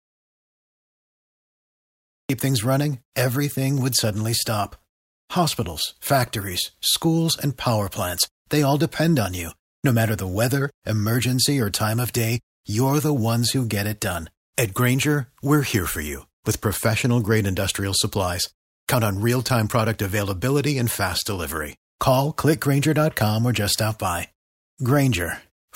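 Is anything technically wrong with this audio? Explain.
Yes. The speech clip opens in complete silence, with no room tone at all, until 2.30 s, where the sound begins abruptly mid-flow with "things running everything would". This is an audio dropout to silence, likely from the input being lost while the recorder kept writing silence.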